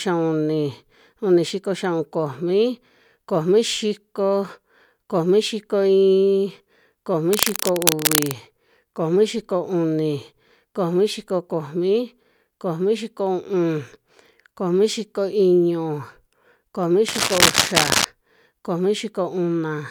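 A worn cable or connector was likely being moved, its contact resistance jumping about, so cable scratch noise rustles over the speech, roughly as loud, from 7.33 to 8.32 s and 17.08 to 18.05 s.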